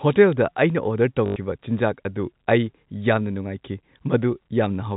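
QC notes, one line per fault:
1.26–1.36 s, packet loss with last packet repeated: about 100 ms of the stream never arrived, and the receiver filled the gap by replaying the last good packet over and over, which fits five lost 20 ms packets. The repeats restart without regard to the pitch cycle, and the run becomes a short robotic stutter with a 50 Hz buzz at the packet rate, heard through the 4 kHz-limited G.711 telephone band.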